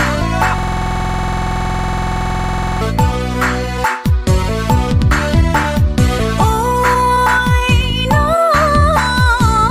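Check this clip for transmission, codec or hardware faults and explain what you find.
A system hang loop runs from 0.58 to 2.81 s. The machine stalled while the sound hardware kept replaying its ring buffer, so a 46 ms slice, which fits a 2048-sample buffer, repeats exactly about 48 times and produces a rapid 21.5 Hz machine-gun stutter.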